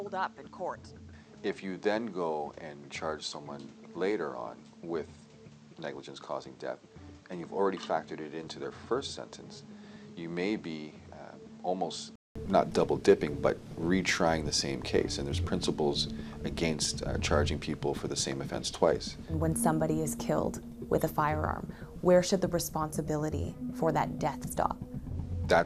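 For the first 12.36 s the sound is dull, quieter and hissier, with nothing above 8.5 kHz, then clears after a 200 ms gap; likely an input switched to a poorer device.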